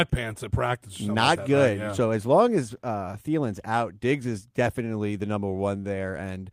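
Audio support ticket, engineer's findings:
Nothing stood out on listening to this speech clip, so there are no findings to log against it.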